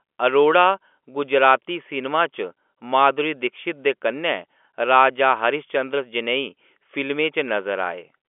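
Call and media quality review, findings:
No findings for this call and media quality review: the speech comes through G.711 telephone coding on a narrowband line with nothing to report.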